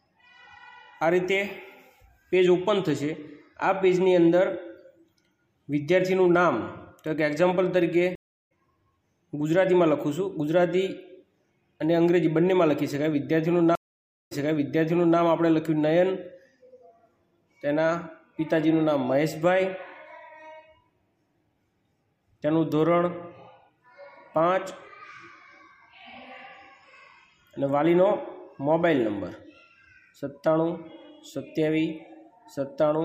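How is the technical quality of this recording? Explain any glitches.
Two stream reconnects break up the recording. At 8.15 to 8.51 s the sound drops out for 353 ms and returns about 0.4 s further on, skipping material. At 13.75 to 15.19 s a 558 ms silence is followed by a restart 0.88 s earlier, so that stretch repeats. Each time, the connection broke and a fresh decoder picked up mid-stream.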